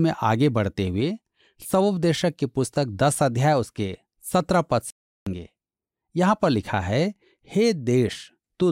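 A speech clip with one clear problem: a playback stall from 4.90 to 5.27 s. The audio just drops out mid-flow for about 0.36 s, dead silence rather than a fade, and then carries on. The likely cause is the player starving for data or its audio thread getting blocked for a moment, so nothing reached the output until it caught up and resumed.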